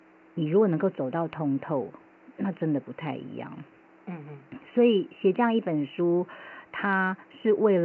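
No faults are audible in this speech; the room noise sits about 33 dB below the voice, and the G.722 wideband telephone coding at 64 kbit/s holds the band to about 7 kHz.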